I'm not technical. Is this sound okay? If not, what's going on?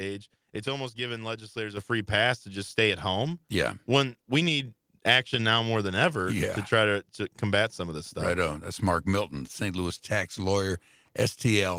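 No. At 1.77 s the microphone volume stepped up. The call software judged the microphone too quiet and turned its input level up in one jump. The speech and the background get noticeably louder together, all at once, instead of gradually.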